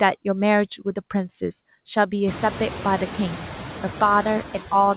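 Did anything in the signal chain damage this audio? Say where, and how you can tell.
Yes, at the call-processing stage: noise suppressor artifacts throughout, with background noise pumping about 4 dB down between phrases and back up under speech, from frame-by-frame per-band gain reduction.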